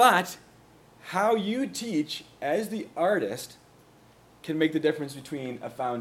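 Nothing in the audio stood out as a technical problem on listening.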